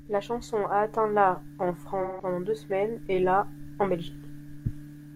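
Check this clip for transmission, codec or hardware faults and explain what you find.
One transmission fault is present in the speech: AAC frame loss with concealment, from 2.02 to 2.25 s. About 170 ms of coded audio went missing, which fits a run of four AAC frames. The decoder bridged the hole by reusing the last good spectrum with randomised phase, so the sound turns smeared, noisy and phasey there instead of breaking off. That synthetic fill, rather than a hard silence or click, is what separates it from a plain dropout.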